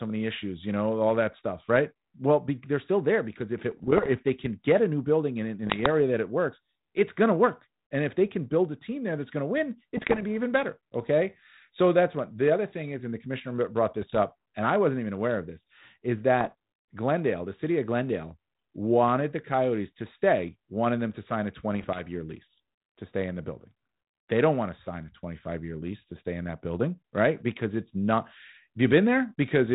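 Bit errors on the ADPCM link hit the speech at 3.7–4.09, 5.67–5.87, 9.97–10.23, 14.02–14.19, 16.41–16.53 and 21.75–22.07 s. Each flipped bit throws off the decoder's step size and predictor, so pops and rough bursts with brief level jumps ring on.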